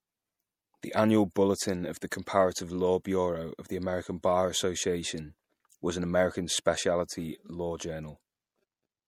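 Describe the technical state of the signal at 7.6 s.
At 7.6 s the speech carries plainly audible MP3 compression damage, present for the whole clip. The sound is watery and swirly, and s sounds have a metallic, chirpy edge. Nothing is heard above 18.8 kHz. The likely cause is an MP3 encoder starved of bits, which fits a low bitrate near 64 kbps. It cuts the treble at a fixed point and drops weak frequency lines, which flicker on and off between frames.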